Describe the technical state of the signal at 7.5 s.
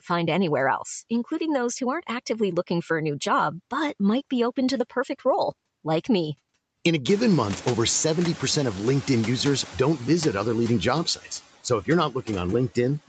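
At 7.5 s you're early in the noise suppressor catching up, which runs from 7.06 to 9.77 s and ends just before "don't visit other leading". The room noise jumps by about 22 dB around 7 s, and the suppressor's noise estimate lags, cutting only about 5 dB at first. So the noise comes through strong and then sinks over roughly 2.7 s as the estimate adapts.

The usual noise suppressor artifacts are also present here, as they are across the whole clip, with the residual noise normally pulled down by about 17 dB. Frame-by-frame band gating makes the leftover noise dip between syllables and swell under them. That all sits inside an 8 kHz top end from the call path.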